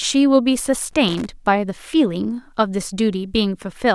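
From 0.85 to 1.30 s the speech breaks into loose connector crackle: a worn contact making and breaking intermittently, chopping the signal into an irregular scratchy burst.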